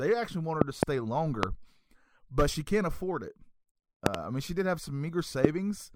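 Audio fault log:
0.61–5.47 s, loud pop: a likely electrical pulse from a switch, plug or static discharge is added to the signal, heard as sharp pops about 25 dB above the speech, which carries on underneath. There is a double pop at 0.61–0.85 s after "actually want her", a single at 1.43–1.45 s, a double at 4.06–4.17 s before "I mean she did", and a single at 5.45–5.47 s.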